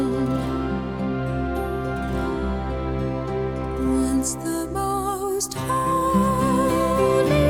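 No technical faults are audible anywhere in this recording.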